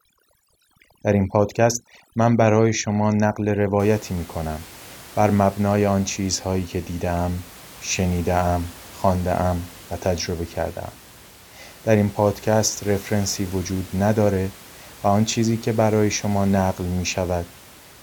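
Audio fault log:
0.0–3.8 s, overdone noise removal: the denoiser's clamping down way too hard here, so any band near its noise estimate gets pulled right out. The background drops and breaks up into little twinkly specks.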